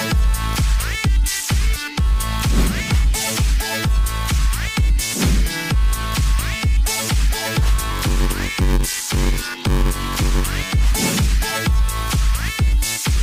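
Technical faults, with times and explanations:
Throughout: clock drift between sender and receiver. The sending end's clock runs fast, by around 5 percent, so audio arrives quicker than it is played out. The receive buffer keeps filling, which forces the receiver into a continuous series of small corrections to hold its level steady.
0.13 to 13.23 s: repeated timing corrections. The receiver drops short pieces of audio to keep up, and the net playback speed sits at 103 percent. The cuts all go the same way but land at uneven spacing, so they come across as faint hiccups and a slightly unsteady pace.
7.90 to 10.73 s: block size mismatch (padded). One stage hands over shorter blocks than the next stage reads, which fits a 512-sample read, and zeros fill each remainder. The repeated gaps produce a buzz at 93.8 Hz, and the sound slows to 0.861 times normal speed while keeping roughly its normal pitch.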